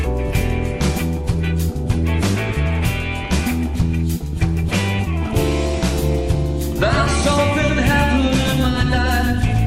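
A second copy of the signal is likely being picked up through a slower path, or an edit has left two copies out of step, producing a doubled audio track from 6.76 s through to the end of the audio. Everything is followed by a full-band duplicate trailing by roughly 150 ms and only a few dB quieter, with no decay or room colouring, so each sound arrives twice like a flat, hard-edged slapback that snaps in abruptly.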